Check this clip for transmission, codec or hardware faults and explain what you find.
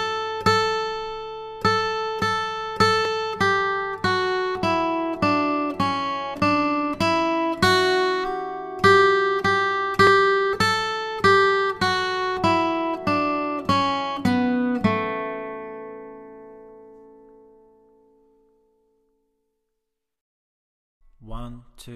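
Four isolated clicks stand out, at 2.22, 3.05, 6.40 and 10.07 s. Each is a single sharp tick, seen as a thin vertical line through the spectrum, with nothing audibly missing around it. The likely cause is dropped samples: well under a millisecond of the stream goes missing each time, so the waveform jumps straight from one value to a later one. That sudden step produces the click, while the loss is far too brief to remove any sound.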